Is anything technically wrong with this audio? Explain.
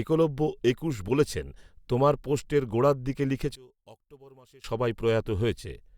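Yes. One channel inverted, from 3.55 to 4.64 s: in mono the speech drops by about 26 dB to a faint trace. The likely cause is reversed polarity on one stereo channel, so the centred voice common to both sides cancels when summed.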